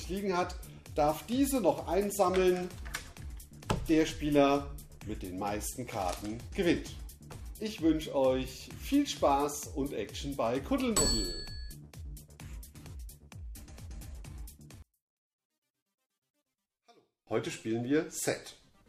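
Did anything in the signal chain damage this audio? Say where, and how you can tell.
Yes. From 14.82 to 17.27 s the level drops about 35 dB, likely from one channel inverted in the wiring, so shared content cancels when summed to mono.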